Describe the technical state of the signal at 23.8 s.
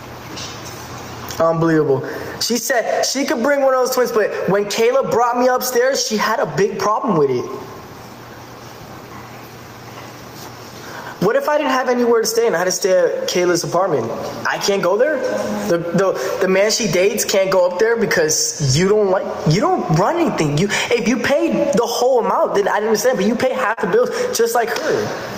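A brief smear or wobble runs from 23.73 to 23.79 s, where about 40 ms of audio went missing. This is short concealed packet loss: the receiver extended the preceding sound for 34 ms, then blended back. Underneath, the gain swings by about 15 dB, the squashed character of gain pumping, likely from excessive input gain driving a fast limiter.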